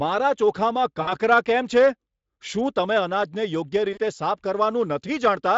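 At 1.01 s to 1.13 s, speech breaks into VoIP packet loss concealed by the speech codec. About 60 ms goes missing, which fits three 20 ms frames. The decoder repeats its last pitch and filter at falling gain, giving a fading buzzy or noisy smear. At 3.93 s to 3.99 s, a shorter 40 ms gap does the same over the light Speex coding.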